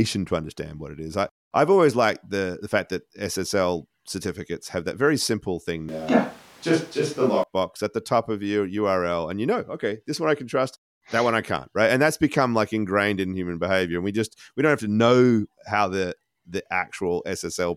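Speech recording with a switch to a distant microphone from 5.89 to 7.43 s, between "that very simple thing" and "at the top of". The sound turns abruptly roomy and hollow with less low end, at roughly unchanged level and with room noise about 30 dB below speech, likely from a close microphone dropping out.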